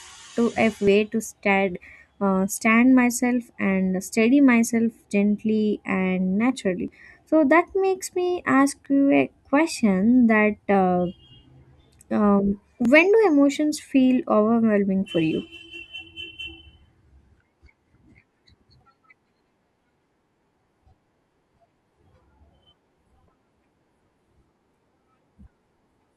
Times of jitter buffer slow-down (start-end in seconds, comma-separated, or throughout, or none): none